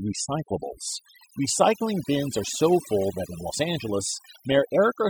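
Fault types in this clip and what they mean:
Overdone noise removal: a noise reducer pushed too hard is clamping down on every frequency band that sits near its idea of the noise floor. Throughout this speech clip, the gaps drop to near silence with little twinkly specks, and the softer parts of the voice get eaten too.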